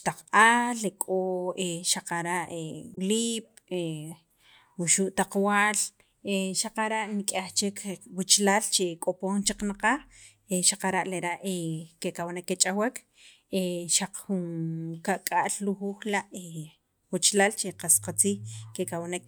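Damaged data in the compressed stream hits at about 2.92 to 2.98 s, a stretch of roughly 64 ms. The decoder misreads the corrupted frames, loses sync and hunts for the next valid header. In the speech this comes out as a brief glitch.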